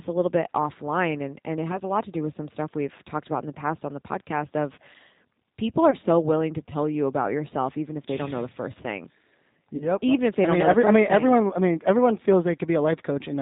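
From start to finish the speech has a slightly rough, synthetic edge, with a dull top end because nothing above 4 kHz comes through. This is the G.729 codec, plainly audible here, and the sound fits G.729A at 8 kbit/s. The codec rebuilds each 10 ms frame from a vocal tract filter, a pitch predictor and a few coded pulses, so fine detail is replaced by a modelled approximation.

At 1.72 to 1.80 s, between "offline and and it" and "a lot to do", the speech briefly smears into a buzzy tone or coloured noise that fades, and stays weak for a moment afterwards. At 5.91 to 5.95 s, between "people are" and "so willing to tell", the same smearing is heard. At 9.76 to 9.89 s it is longest. These are VoIP packet loss concealed by the speech codec. The gaps point to roughly one, two and four missing 10 ms frames. For each gap the decoder stretched its last pitch and filter with falling gain. Because each frame depends on the one before, the speech stays distorted briefly after packets resume.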